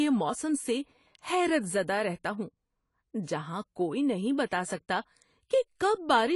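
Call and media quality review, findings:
AAC compression, throughout speech. Dull, smeared top end, nothing above 11.4 kHz, warbly fizz on sibilants, plainly audible. Likely cause AAC-LC encode at a low bitrate, consistent with about 32 kbps: encoder lowered its cut-off and quantised high bands coarsely against its hearing model.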